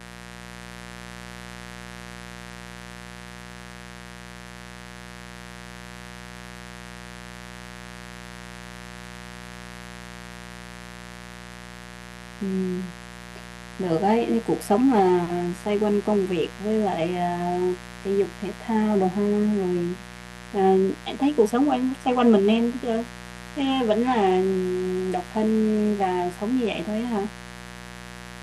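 A speech recording carrying mains buzz for its entire length, a raspy, steady tone sitting around 20 dB below the voice. Its spikes repeat on a 60 Hz mains supply, spraying harmonics into the kilohertz range, which separates it from smooth, low-pitched hum.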